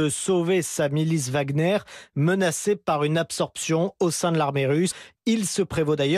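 Right after "au sein de l'armée", at about 4.90 to 4.92 s, there's a case of compressed frames being skipped. Part of the encoded stream never made it to playback, either lost or thrown out by the decoder as corrupt, so the speech lurches forward by roughly a tenth of a second, which fits around four frames' worth.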